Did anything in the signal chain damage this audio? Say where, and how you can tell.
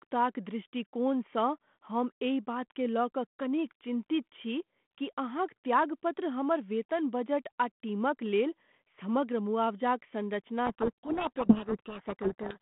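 Yes: a codec payload misread from 10.66 s to the end buries the speech in harsh distortion. The G.726 decoder is reading the code words with their bit order reversed.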